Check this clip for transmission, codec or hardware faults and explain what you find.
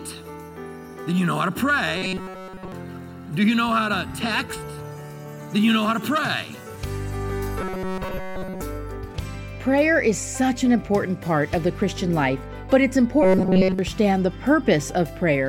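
Robotic sound from repeated short buffers appears three times: 1.98 to 2.72 s, 7.61 to 8.61 s, and 13.23 to 13.79 s. The sound becomes a rigid metallic buzz at 188 Hz, nearly all-buzz in the first two events and mostly in the third. Audio likely arrived too seldom, so a segment of about 5.3 ms looped in place of the missing sound.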